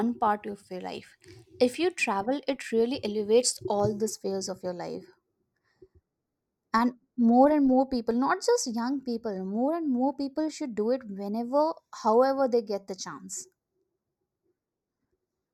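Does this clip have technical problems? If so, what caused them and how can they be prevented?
Yes. From 3.8 s, after "travel it really elevates", to the end, speech turns hollow and phasey: channel delay (comb filtering), a sub-millisecond lag notching near 3 kHz. Prevent it by time-aligning both channels before summing to mono.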